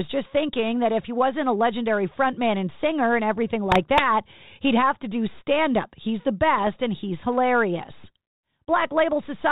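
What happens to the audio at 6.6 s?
Bit errors on the ADPCM link corrupt the decoder's step size and predictor from 6.58 to 6.64 s, producing pops and a rough burst just before "and he's hilarious".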